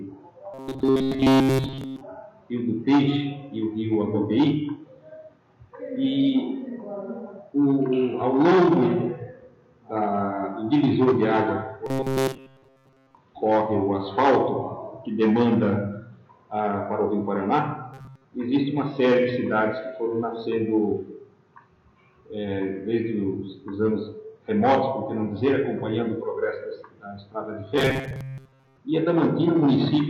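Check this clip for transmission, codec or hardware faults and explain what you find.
A rigid, metallic buzz pitched at 133 Hz appears four times: 0.54 to 2.01 s, where it covers the whole stretch, then 11.86 to 13.18 s, 17.94 to 18.25 s and 27.78 to 28.78 s, where it covers most of each stretch. This is robotic sound from repeated short buffers, likely caused by audio arriving too slowly, so each 7.5 ms fragment is replayed in place of skipped material. That fixed repetition imposes the 133 Hz pitch.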